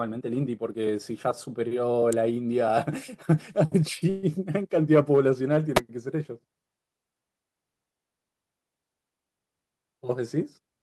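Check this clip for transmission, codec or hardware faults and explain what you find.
Two kinds of fault are present in this speech: brief electrical snaps and one short stall in the call stream.

Electrical switching spikes at 2.13 s and 5.77 s are sharp, isolated snaps laid over the speech. They are most likely arcs from a nearby switch, motor or static discharge picked up by the audio line, lasting about 1 ms and 11 ms respectively.

Call audio freeze, from 4.09 s to 4.25 s, was likely caused by delayed packets draining the jitter buffer. The receiver filled about 135 ms by stretching the last sound into a fading buzz or hiss, with no outright silence. Speech then resumes where it stopped, so nothing is lost but everything after runs 135 ms late.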